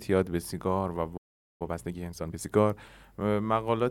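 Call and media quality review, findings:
Playback stall, 1.17 to 1.62 s: likely buffer underrun or blocked playback thread in the player; speech cuts out mid-flow and output goes silent for about 430 ms before resuming.

Time-compressed catch-up, 1.62 to 2.46 s: player trims accumulated backlog by dropping short segments and cross-fading the joins; speech runs about 1.5 times faster at unchanged pitch, sounding rushed.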